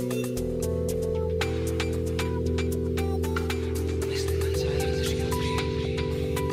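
No technical faults can be heard anywhere in the clip: the signal holds steady in level and timing with no breaks or disturbances.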